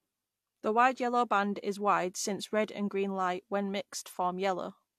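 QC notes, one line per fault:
throughout, transcoding between lossy codecs: the speech was likely encoded twice, first by an HE-AAC stage and then re-encoded as AAC-LC, with both bitrates pointing to a low-to-moderate range of roughly 48 and 64 kbit/s. The second encoder spends bits reproducing the first one's damage while adding its own, so two distinct sets of artefacts sit together. The lowest band limit in the chain persists, leaving nothing above 14 kHz.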